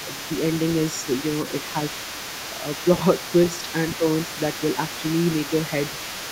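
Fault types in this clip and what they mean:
Other side's voice leaking through: Throughout the clip a second voice sits underneath the main speech, roughly 15 dB down. That's most likely the far end playing out of the talker's loudspeaker and getting back into the microphone because the echo canceller didn't fully scrub it. It's quiet but always there.
Speech suppressed in double talk: There are two brief dips in the talker's voice, around 3.72 to 3.78 s and again around 3.98 to 4.05 s. Each is a short, shallow duck of roughly 5 dB. The likely cause is both sides speaking at once, with the echo canceller unable to tell its own talker apart from the loudspeaker echo and pulling the level down across the board for a moment.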